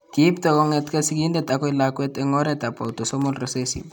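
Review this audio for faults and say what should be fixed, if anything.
A train of clicks runs from 2.49 to 3.48 s: around seven pops at about 5.1 per second, unevenly spaced, peaking roughly 5 dB above the speech, likely from interference or a faulty connection. A spectrogram shows thin broadband vertical lines; the waveform, sharp spikes. Shielding cables and securing the interface would prevent it.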